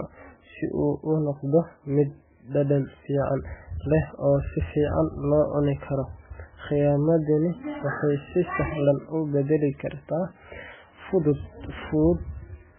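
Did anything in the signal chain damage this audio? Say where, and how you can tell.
Yes, the codec stage did the damage, and it runs the whole way through. Nothing survives above about 3.4 kHz, so the speech sounds boxed in and dull. The rest has that watery, swirly texture you get when weak frequency lines keep dropping in and out between frames, and consonant onsets come out smeared. It's likely MP3 compression squeezed hard, and damage this heavy points to a starved bitrate, somewhere around 8 kbps.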